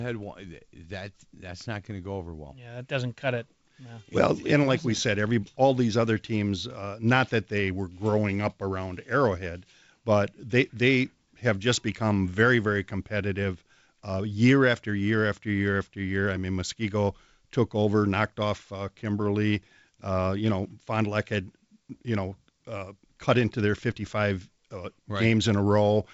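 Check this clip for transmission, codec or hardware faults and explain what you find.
Nothing here points to a transmission, codec or hardware fault; the speech comes through as you'd expect from G.722 wideband telephone coding at 56 kbit/s, topping out around 7.7 kHz, with a faint touch of hiss up top and slightly noisier lower-band coding.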